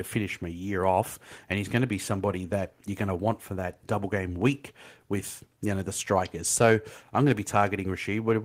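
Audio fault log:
Nothing stood out on listening to this speech recording.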